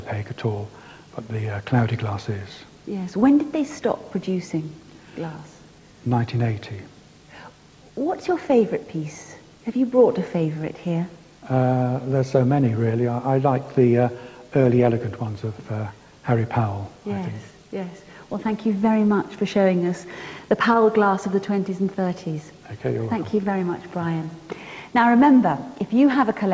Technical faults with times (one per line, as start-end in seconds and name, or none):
none